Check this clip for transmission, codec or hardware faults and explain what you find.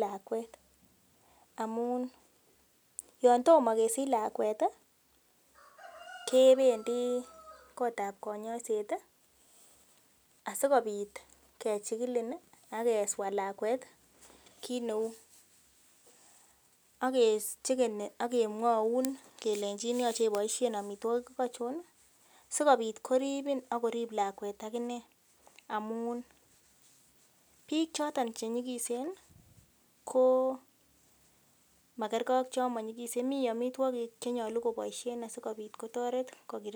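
No faults found here.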